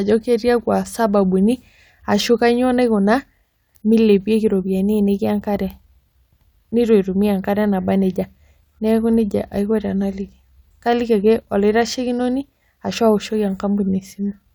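No technical faults are audible.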